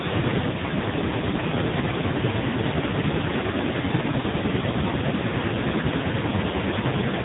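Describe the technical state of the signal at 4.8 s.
At 4.8 s you're hearing AMR narrowband mobile codec damage, and it runs through the whole clip. The speech has been squeezed through a vocal-tract model fed by sparse pulses, and with narrowband sampling nothing gets past 3.8 kHz. The heavy buzzy, synthetic quality points to something near AMR-NB's 5.15 kbps mode.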